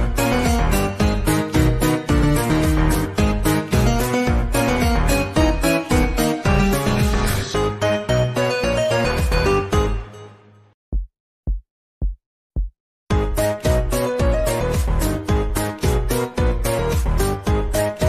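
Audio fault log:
No faults logged; nothing audible calls for an entry.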